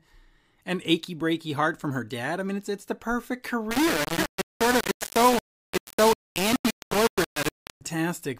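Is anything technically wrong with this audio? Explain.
Yes. From 3.71 s to 7.81 s, right after "it's it's the perfect", the speech shows low bit depth without dither, likely from rounding to about 3 bits without dither. The error tracks the voice, so it turns harsh and grainy, with distortion nearly as loud as the speech.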